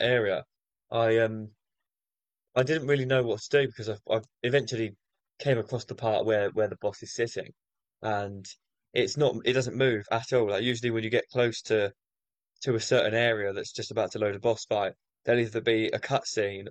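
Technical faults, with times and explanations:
Nothing stood out on listening to this recording.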